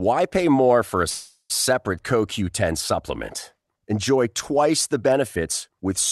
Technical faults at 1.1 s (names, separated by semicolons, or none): call audio freeze